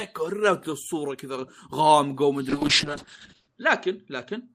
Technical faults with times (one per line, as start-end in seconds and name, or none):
2.50-4.55 call bitrate drop